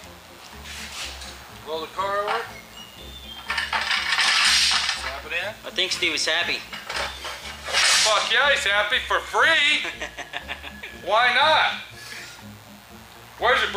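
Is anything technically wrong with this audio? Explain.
Yes. Mains buzz runs throughout: switching spikes locked to 60 Hz mains leak in, spraying harmonics into the kilohertz range, heard as a steady raspy buzz roughly 30 dB below the sound.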